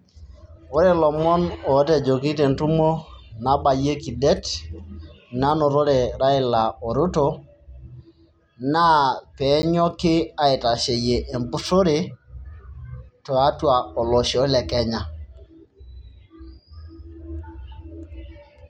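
At 9.62 s a block of digital silence interrupts the speech: about 10 ms of samples drop to silence, likely because the output buffer was not filled in time. The abrupt edges produce a brief tick. The waveform shows a flat-line notch, the spectrogram a thin vertical gap.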